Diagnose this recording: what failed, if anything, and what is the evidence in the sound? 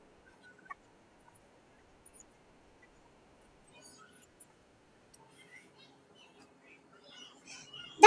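A wrong sample rate at the playback stage affects the entire speech clip: it runs about 1.38 times fast and sits roughly 5.5 semitones high, with tempo and pitch shifted together. That fits audio recorded at 16 kHz being clocked out at 22 kHz without resampling.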